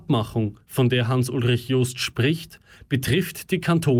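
Nothing goes wrong anywhere in this short bit of speech, so there's no fault to point to at any moment.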